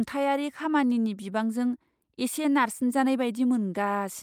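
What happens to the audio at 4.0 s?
Nothing goes wrong at 4.0 s: the speech carries on intact through that moment, with no dropout, click, glitch or change in level or tone.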